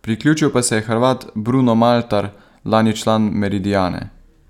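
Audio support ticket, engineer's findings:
No fault found on the speech clip. Nothing heard that points to any component in the chain.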